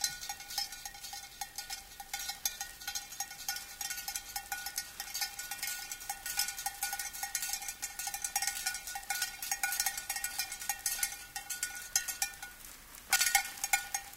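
At 9.77 to 9.92 s and again at 13.16 to 13.26 s the sound briefly turns into a garbled flutter. These are frames out of order: two adjacent blocks, about 72 ms and then 48 ms each, were decoded in swapped order, with no time lost.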